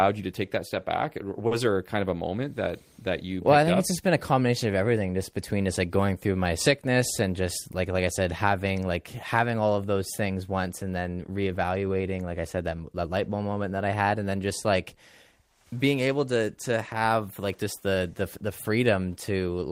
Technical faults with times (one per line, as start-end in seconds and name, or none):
1.47-1.53 short stall from a late packet
6.88-7.41 jitter buffer speed-up